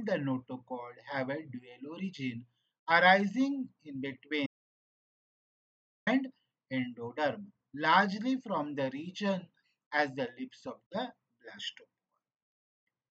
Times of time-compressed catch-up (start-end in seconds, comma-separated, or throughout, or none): none